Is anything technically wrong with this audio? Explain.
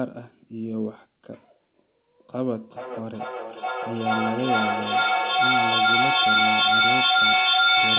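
Yes. From 2.6 s to the end there is feedback echo between two devices. Another device in the room replays the call, and the original device's microphone picks it up again, where no echo canceller removes it. Repeats come roughly every 0.4 s and build up, reaching about 9 dB above the speech. On a spectrogram these appear as evenly spaced, stacked copies, and the waveform swells instead of decaying.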